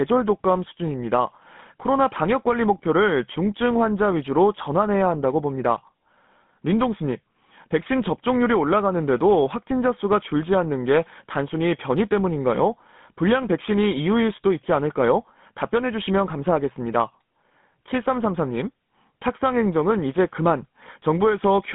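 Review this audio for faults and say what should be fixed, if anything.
Throughout the speech, GSM full-rate codec damage: a buzzy, gravelly texture from pulse-driven vocal-tract modelling, consistent with 13 kbps, band-limited to 150 Hz–3.6 kHz. Prevent it by capturing from a wideband source instead of a GSM phone path.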